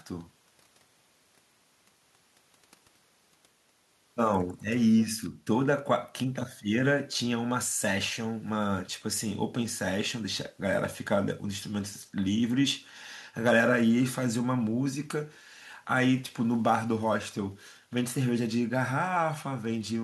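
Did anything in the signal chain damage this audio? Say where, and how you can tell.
No, nothing in the signal chain stood out as having damaged this speech recording on listening.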